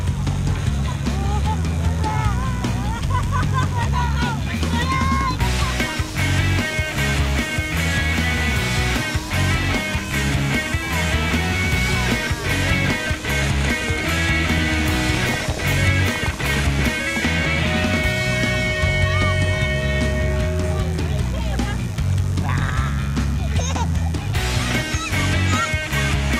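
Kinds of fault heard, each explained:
Mains buzz: a steady, raspy buzz running under the whole clip, built on 50 Hz and its harmonics reaching up into the kilohertz range, sitting roughly 20 dB below the sound. That sharp edge comes from switching spikes twice per mains cycle, like a dimmer or rectifier leaking in.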